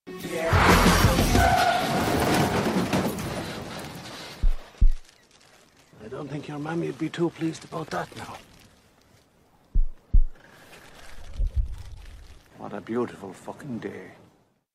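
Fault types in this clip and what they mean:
Phantom power thump: a deep, blunt thump at 11.68 to 11.74 s that dies away within about 13 ms. Phantom power or another supply was switched on or off on a live input, and the voltage step passed through the coupling capacitors into the signal.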